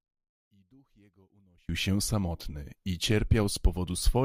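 From 0.0 to 1.69 s the speech drops about 35 dB, likely one channel inverted, its centred content cancelling when both are summed to mono.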